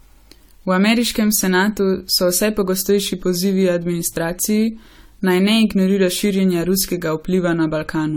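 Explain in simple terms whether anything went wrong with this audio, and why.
Throughout the speech, the sound is swirly, smeared and hollow, and the starts of sounds are blurred. This is generation loss: the audio was likely compressed several times over, each pass adding fresh damage, so it sounds worse than a single rough compression would.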